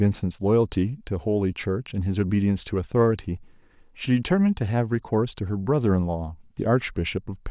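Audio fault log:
No technical faults can be heard anywhere in this speech recording.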